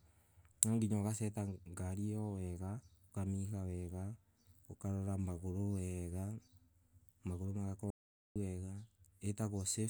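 At 7.90 s the speech cuts off abruptly into dead, total silence with no room tone beneath it, and resumes mid-flow at 8.36 s, 0.45 s later. This is an audio dropout to silence, likely from the input signal being lost while the recorder kept writing zeros.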